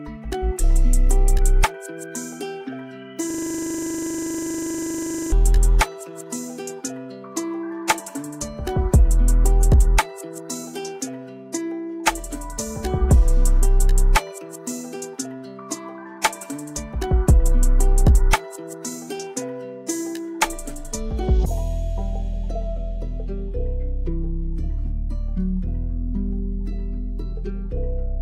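At 3.30 s the system stalls in a system hang loop: the computer or its audio driver stops delivering fresh samples, while the playback hardware keeps reading the same small stretch of its ring buffer. A 40 ms slice therefore repeats identically about fifty times until 5.32 s. Because the slice is so short, the repetition fuses into a rough, steady buzz at 25 Hz rather than distinct stutters.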